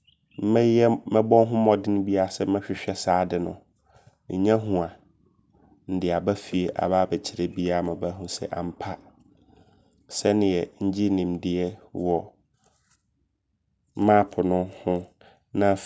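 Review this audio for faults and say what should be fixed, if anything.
Nothing needs fixing: the speech signal holds steady, with no audible technical faults anywhere in the recording.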